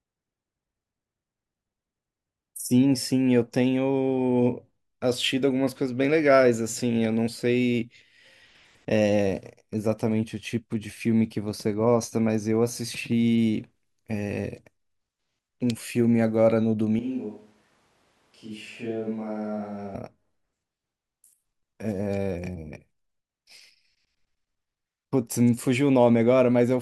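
A speech recording that, from 16.99 to 19.95 s, suddenly turns roomy and hollow and drops by roughly 10 dB, with more background noise coming up, sitting roughly 35 dB under the speech. Then it snaps straight back. That abrupt in-and-out change is the classic switch to a distant microphone, likely because the close mic's signal dropped out or went unused for that stretch, and a mic further away, such as a camera's, filled in.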